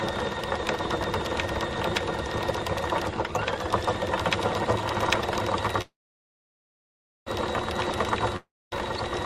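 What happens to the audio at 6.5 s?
At 6.5 s the sound is inside a call audio freeze running from 5.81 to 7.28 s. The last sound extends briefly, then about 1.36 s of silence follows. The likely cause is delayed packets draining the jitter buffer. Playback resumes where it stopped, adding about 1.45 s of delay.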